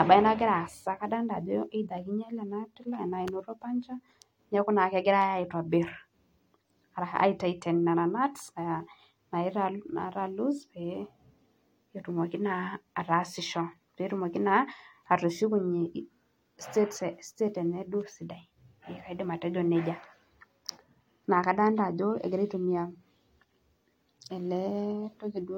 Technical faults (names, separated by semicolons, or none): none